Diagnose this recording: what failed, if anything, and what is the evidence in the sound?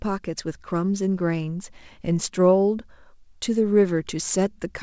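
Nothing in this speech recording points to a failure: it has passed through a call path that is working as intended, and its content stops at 8 kHz, which fits a wideband call codec such as G.722.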